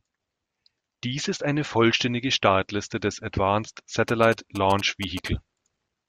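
Speech, interrupted from 4.08 to 5.28 s by a galloping dit-dit-dit pattern of short 217 Hz buzzes, about 15 dB below the speech. These are GSM signalling bursts: a nearby 2G phone sending brief groups of radio bursts, which the audio circuitry rectifies into audible pulses.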